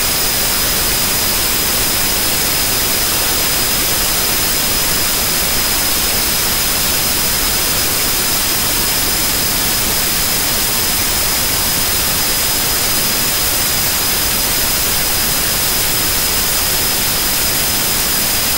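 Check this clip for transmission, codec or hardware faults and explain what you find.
A second copy of the audio has been mixed in, a doubled audio track running for the whole clip. The likely cause is the same signal arriving twice, once directly and once through a slower capture path, with the late copy about a second behind and around 5 dB quieter. It is full-band with no decay or room colour, so every sound is followed by a clean, slightly softer repeat rather than an echo tail.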